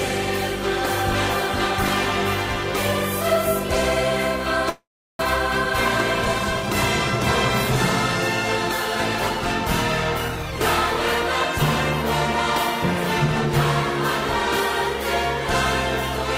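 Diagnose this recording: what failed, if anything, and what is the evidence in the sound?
The network stage failed, most likely a long network dropout in which packets stopped arriving for a stretch. From 4.69 s to 5.23 s the last sound is extended as a fading buzz or hiss that gives way to about 360 ms of silence. When audio resumes, roughly 400 ms of material is gone and playback sits about a tenth of a second later than before, as the receiver's jitter buffer absorbed the gap.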